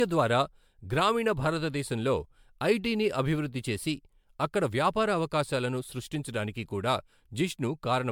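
Generation loss runs through the whole speech clip: the sound is swirly, hollow and smeared, attacks blur, and nothing sits above 19.9 kHz. The likely cause is repeated lossy re-encoding, around ten passes consistent with 128 kbit/s MP3, each requantising on a shifted frame grid so noise and spectral holes accumulate.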